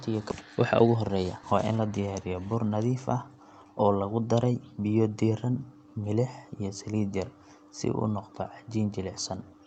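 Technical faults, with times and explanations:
0.31 s to 0.33 s, skip ahead: playback jumps forward with no fill, so roughly 400 ms of speech never plays and the two sides butt together almost seamlessly. Unlike a dropout, there is no silence or smoothed gap; material simply vanishes, cutting the buffered delay by about the same amount.
0.41 s to 2.07 s, jitter buffer speed-up: the receiver trims short pitch-period slices repeatedly to shed excess queued delay, so speech runs at about 114% speed, roughly 200 ms in total, sounding hurried while pitch stays unchanged. That steady pitch separates it from simple resampling.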